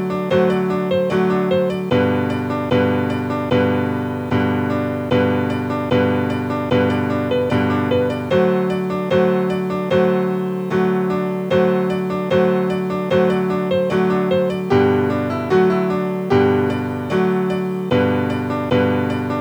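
A constant, even hiss runs throughout the audio, about 35 dB below the signal, with no distortion. This is low bit depth with dither, which fits 9-bit rounding. It appears as a uniform noise floor across the spectrogram and as fuzz thickening the waveform's quiet parts.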